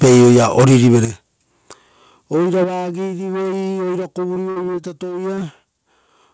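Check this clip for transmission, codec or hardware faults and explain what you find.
Four kinds of fault are audible in the speech. It is carried over a call path whose band stops at 8 kHz, which fits a wideband codec such as G.722.

Microphone overload, 0.02 to 1.05 s: the peaks are flattened, likely because the input gain drove the converter about 5 dB past full scale. Roughly a fifth of the samples sit at the limit. The loudest syllables crackle harshly. Unlike codec noise, this distortion tracks level and is worst on the peaks.

Microphone volume stepped down at 0.04, 1.05 and 2.64 s: the level drops abruptly by about 2, 9 and 6 dB, likely as call software cut the device's input gain after detecting clipping. Voice and background fall together in a single step rather than cutting out, and the 1.05 s step coincides with the end of the overload.

Repeated packet loss (robotic sound), 4.34 to 4.85 s: four gaps, the longest 59 ms and 120 ms missing in total, were patched by extending the preceding sound, covering 22% of the span. 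The speech turns choppy, with holes recurring in quick succession rather than once.

Short concealed packet loss, 5.35 to 5.39 s: a single 20 ms hole was filled by continuing the preceding sound, then blended back into the real audio. It is heard as one brief smear or wobble, isolated, unlike the sustained robotic run just before it.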